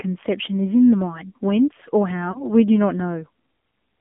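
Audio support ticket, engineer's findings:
Whole clip: AMR narrowband mobile codec damage, plainly audible. Band limited to 200 Hz–3.5 kHz at 7.4 kbps, buzzy, synthetic speech. Spectrogram: hard ceiling near 3.5 kHz, empty above 4 kHz, smeared harmonics.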